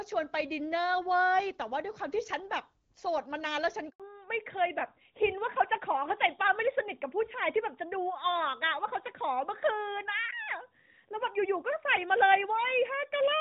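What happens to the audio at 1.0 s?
Nothing goes wrong at 1.0 s: the speech there comes through intact, carried by the AMR wideband (HD Voice) codec at 12.65 kbit/s, which keeps it clear with only light coding damage.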